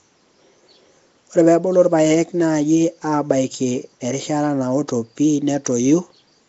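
From start to finish the speech carries a rough, hissy halo and a smeared, underwater feel, and nothing comes through above about 7.7 kHz. That's most likely Nellymoser compression, the old Flash microphone codec. It spends a small, fixed bit budget on short blocks, so weaker bands get starved and filled in with noise. The damage is plainly audible here, and the dullness fits a low setting of around 32 kbps.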